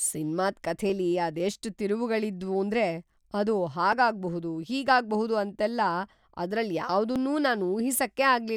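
At 0.90, 3.93 and 7.16 s the speech skips forward, losing roughly ten milliseconds each time without any gap. That's likely a dropped buffer (overrun): the samples weren't collected in time, got overwritten, and the two sides were butted together.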